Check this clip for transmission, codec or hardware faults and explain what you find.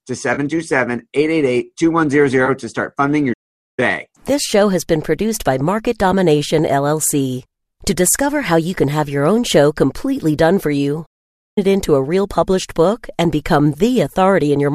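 Two kinds of fault are audible in this speech: brief AAC frame loss with concealment, and two longer playback stalls. Both occur within a light, likely low-delay AAC compression layer.

AAC frame loss with concealment occurs from 0.34 to 0.39 s (about 30 ms) and from 2.46 to 2.49 s (about 20 ms). That fits three and two lost 10 ms frames. The decoder patched each gap from the preceding spectrum, leaving a short smeared, noisy blur.

The playback stalls run from 3.33 to 3.79 s (about 0.45 s) and from 11.06 to 11.58 s (about 0.51 s). Each time the output drops to silence mid-flow, then carries on. This is likely an output buffer running dry or the playback thread being blocked until data arrived again.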